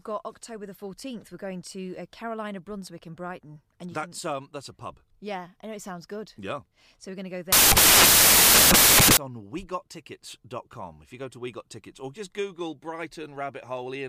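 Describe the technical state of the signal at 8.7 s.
Samples built from the wrong bytes occupy 7.52 to 9.17 s, so 8.7 s falls inside the fault, which begins just after "we're going to go". Here the decoder assembles each sample from misaligned or swapped bytes, promoting the rapidly fluctuating low-order bits into the dominant part of every value. The speech is replaced by loud, harsh broadband noise.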